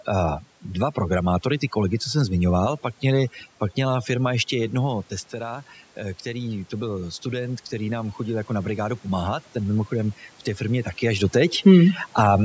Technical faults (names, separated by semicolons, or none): overdone noise removal